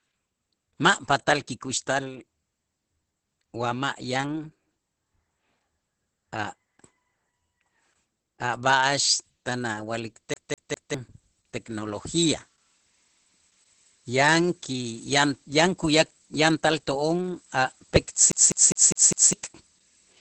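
Speech heard through heavy Opus voice compression, with two bursts of a CD stuck on one turn. Throughout, nothing is present above about 8.4 kHz, which fits Opus's wideband mode, and the voice sounds muffled, hoarse and faintly robotic. That character points to the SILK linear-prediction coder running at a low bitrate, around 10 kbps, and coding the excitation coarsely. A plain low-pass filter would dull the top end but leave the voice smooth. A transform codec such as MP3 would add swirly, watery artefacts rather than this rasp. The skips come at 10.34 to 10.94 s, where the same 0.2 s slice plays 3 times, and at 18.32 to 19.33 s, where the same 0.2 s slice plays 5 times. Each jump back carries a brief mute, and the repeats are fast and perfectly even, like a laser thrown back to the same spot on every turn of a scratched disc. A network or buffer glitch that replays audio tends to repeat a much shorter fragment, without the clean mute at each return.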